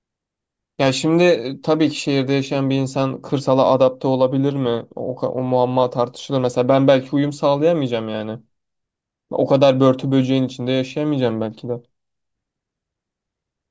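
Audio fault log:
No faults can be heard anywhere in this speech recording. There is nothing here to enter in the log.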